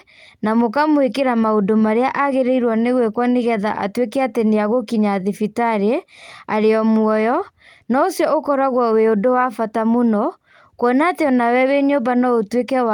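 No technical fault can be heard anywhere in the speech recording. There is nothing to place in time and no mechanism to explain.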